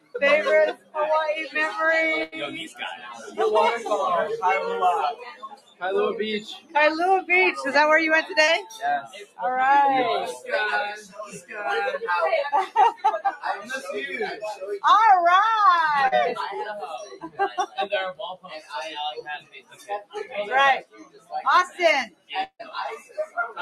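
A noise suppressor built for speech stays active on this material for the whole clip. It treats held tones, ambience and decay as noise, so its gain swings by around 15 dB. Attacks get through while sustained parts sink, and the sound pumps and thins.

From 0.0 to 0.96 s the suppressor judges the sound to be noise and pulls it down by up to about 18 dB. For a few hundred milliseconds, steady content dips and tails are cut short.

At 2.23 to 2.35 s a burst of packet loss removes about 80 ms of audio. The receiver fills the gap for about 85 ms by extending the last sound, which fades into a held buzz or hiss. Playback then resumes a little further on, with that stretch missing.

The suppressor cuts in again from 2.68 to 3.39 s, with a drop of about 12 dB, and from 5.14 to 6.76 s, with a drop of about 17 dB. Over roughly one and a half seconds the sustained sound sags while sharper onsets survive.

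At 8.44 to 8.50 s a short concealed packet loss replaces about 40 ms that never reached the decoder in time. The receiver synthesises a continuation for about 36 ms and blends it back in, which is heard as a brief smear or wobble.

Further suppressor cuts follow at 8.63 to 9.41 s (about 18 dB), 10.33 to 11.57 s (about 15 dB) and 12.66 to 14.64 s (about 15 dB). In each, held material drops away and the sound flutters between loud attacks and hollow gaps.

A second short concealed packet loss at 16.07 to 16.14 s covers about 40 ms with filled-in audio. It leaves another quick wobble where the real signal is missing.

From 16.82 to 23.37 s the suppressor acts on and off over about three seconds, cutting by up to about 18 dB. Decays are chopped and the texture keeps pumping.

Inside that stretch, at 22.43 to 22.62 s, the sound continues as a fading imitation for about 158 ms and then goes silent for about 70 ms. 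About 160 ms of audio is lost before playback returns. The likely cause is a network dropout.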